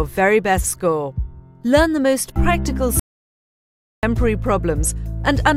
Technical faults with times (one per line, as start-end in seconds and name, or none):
2.99-4.03 audio dropout to silence